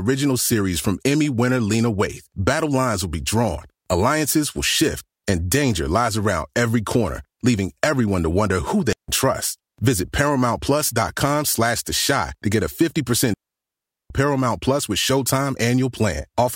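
A speech clip with two clean holes of near silence, with no noise burst on either side: a brief one of about 160 ms at 8.93 s, right after "everyone to wonder who", and a longer 0.76 s gap from 13.34 s to 14.10 s. These are digital wireless dropouts, where the receiver lost too much data and muted with a quick fade.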